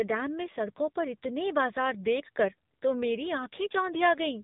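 From start to finish the speech carries AMR narrowband mobile codec damage: a low-bit vocal-tract model leaves it plainly buzzy and synthetic, fitting a low mode near 8 kbps. A spectrogram shows a hard ceiling at 3.8 kHz, empty above.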